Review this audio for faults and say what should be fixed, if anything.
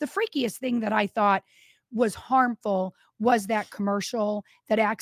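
No faults can be heard in the recording. Nothing needs to be fixed.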